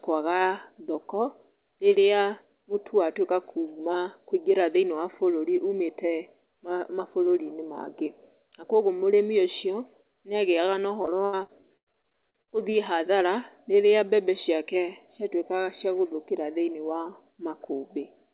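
From 11.02 to 12.74 s, between "ũcio nĩ agĩyaga na" and "hathara rĩrĩa mbembe ciake", repeated packet loss leaves holes up to 95 ms, patched by repeating prior sound, making speech choppy and robotic.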